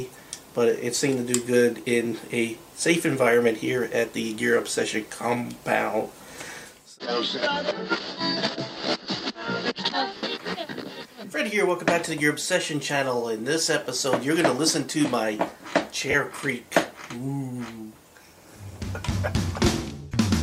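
You'll catch three short dropouts from lost LE Audio frames, at 10.17 s (about 60 ms), 13.84 s (20 ms) and 16.11 s (30 ms), where the LC3 decoder papers over the gap with a noisy smear of the previous spectrum, consistent with a few 10 ms frames going missing each time, with the light lossy compression underneath barely noticeable.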